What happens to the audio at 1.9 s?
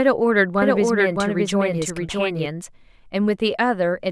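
At 1.9 s the speech sits inside a doubled audio track running from 0.62 to 2.46 s, most likely because a second, slower capture path or an edit holds two copies out of step. A full-band duplicate trails the original by roughly 0.7 s, about 5 dB quieter, with no decay or room colouring. The result is an overlapping second pass of the same speech, and it switches on and off abruptly at each end of that span.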